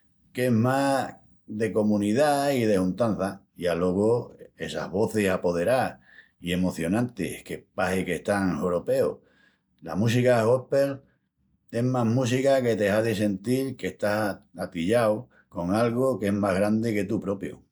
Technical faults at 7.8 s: none

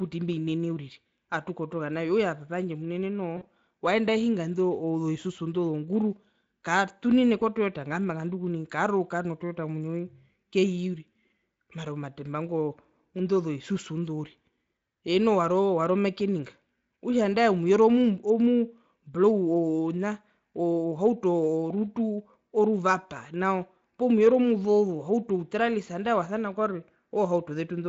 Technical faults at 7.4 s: VoIP packet loss concealed by the speech codec

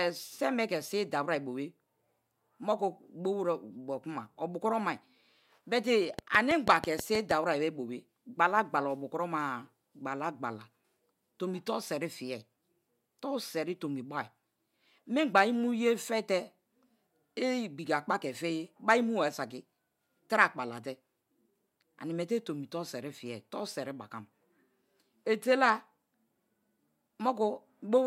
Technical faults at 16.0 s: none

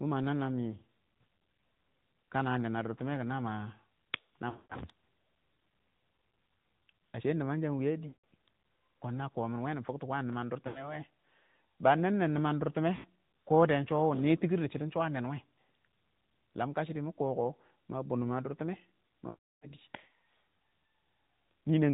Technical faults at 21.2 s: AMR narrowband mobile codec

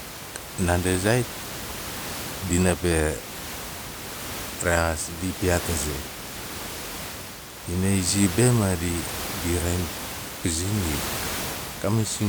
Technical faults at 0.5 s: none

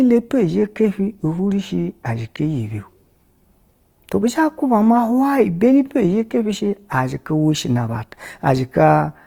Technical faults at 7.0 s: Opus compression

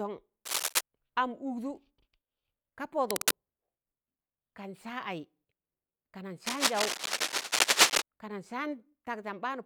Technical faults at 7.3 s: cable scratch noise

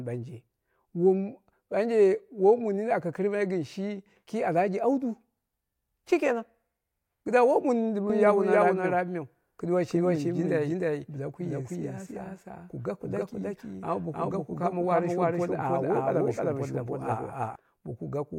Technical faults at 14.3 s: doubled audio track

